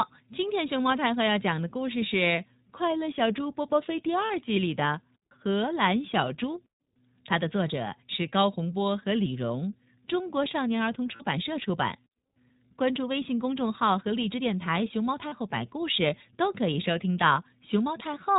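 Throughout this speech, the sound is band-limited with nothing above 4 kHz, and it has a slightly rough, synthetic edge. That is the iLBC codec at work: it codes each frame's excitation independently, and the plainly audible damage fits a 15.2 kbps stream in 20 ms frames. At 4.26, 11.16 and 15.28 s there are brief held, buzzy vowel-like smears of about 40 ms each. These are lost iLBC frames, likely two 20 ms frames each time. The decoder fills each gap by repeating the last pitch cycle with noise, and the sound recovers almost at once.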